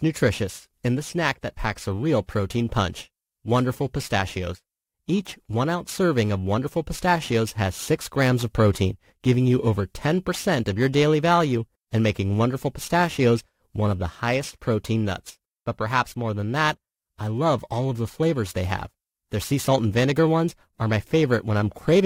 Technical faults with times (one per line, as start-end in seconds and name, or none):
0.00-22.05 periodic clock jitter